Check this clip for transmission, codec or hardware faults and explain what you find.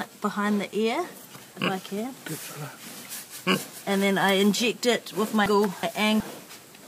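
There's one fault: frames out of order, from 5.46 to 6.20 s. Two neighbouring blocks of about 0.37 s each got swapped, so that stretch plays back to front in halves, fitting four-frame runs. You hear a garbled flutter, but nothing's lost.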